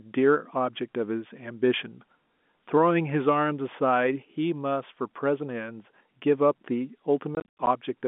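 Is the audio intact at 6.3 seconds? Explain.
Yes, the speech is intact at 6.3 seconds, with no dropout, click or other fault at that point beyond the narrow telephone band of the G.711 line.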